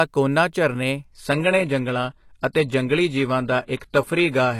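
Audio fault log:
1.05–4.59 s: adaptive stream at a lower bitrate. At 1.05 s the speech switches abruptly, with no gap, to a thinner, band-limited version that lasts to the end. Nothing remains above 12.3 kHz. Coding artefacts rise. This points to the player falling back from a high-bitrate AAC stream to a low-rate HE-AAC one as the connection slowed.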